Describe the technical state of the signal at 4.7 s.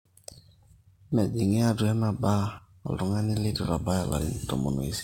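At 4.7 s, as throughout the speech, crude rate conversion by sample repetition, consistent with 44.1 to 48 kHz, leaves gritty fizz about 30 dB down, shown as stray inharmonic spectrogram lines.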